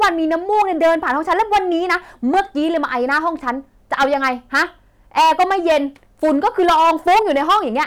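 A harsh fuzz rides on every loud syllable from start to finish: hard clipping. The speech was driven about 13 dB past what the stage could pass, so a small but steady fraction of samples is sliced flat at the ceiling, spraying high harmonics across the peaks.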